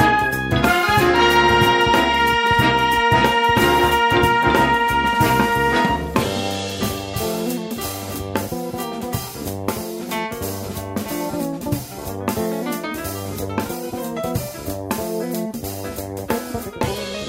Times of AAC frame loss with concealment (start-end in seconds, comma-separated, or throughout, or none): none